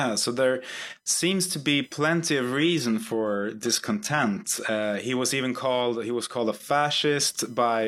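A speech recording with computer activity noise throughout: a faint buzzing chirp pulsing around 1 kHz, roughly 45 dB below the speech. Processor or peripheral load is disturbing the shared audio ground. From 2.59 to 4.59 s, the adaptive stream drops to a lower bitrate. Codec artefacts rise, with nothing above 19 kHz. This fits a switch to low-bitrate HE-AAC after a connection slowdown.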